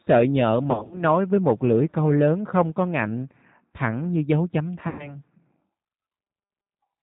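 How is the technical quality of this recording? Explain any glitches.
The recording is intelligible speech, but its quality is clearly limited. A low-bitrate telephone codec colours the whole clip, and two short stretches are damaged by lost packets.

The G.729 codec (G.729A at 8 kbit/s) is audible throughout. The speech is rebuilt from a vocal-tract filter, a pitch predictor and a few pulses per 10 ms frame rather than from the original waveform, so it sounds rough, slightly synthetic and band-limited. On a spectrogram, nothing appears above about 4 kHz. Below that, harmonics look smeared and grainy, with weak detail between formants.

VoIP packet loss concealed by the speech codec appears at 0.71–1.03 s and 4.89–5.17 s. In the first stretch, about 120 ms of audio went missing in gaps scattered over roughly 200 ms, the longest lasting 40 ms, which fits six 20 ms packets. The second loses about 100 ms, which fits five packets. 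The decoder filled each gap by repeating its last pitch and filter settings with falling gain. This stretches the sound into a buzzy tone or coloured noise that fades, and the speech stays weak for a moment after packets return. On a spectrogram, these stretches show a flat, repeated spectral shape that fades out. The waveform shows shrinking amplitude.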